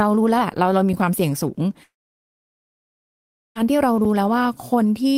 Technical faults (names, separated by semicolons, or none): long network dropout